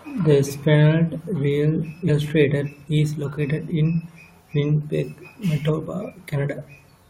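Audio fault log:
2.08–2.10 s and 5.68 s, damaged data in a compressed stream: two brief blips cut into the speech, the first lasting about 20 ms and the second even shorter. At those points the compressed bytes were corrupted, so the decoder misread the frames, lost its place in the stream and had to hunt for the next valid frame header. The garbled frames come out as a glitch rather than clean audio.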